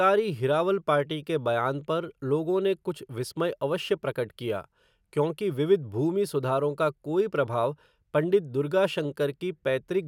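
Nothing goes wrong anywhere in this speech recording; there's simply no technical fault to point to.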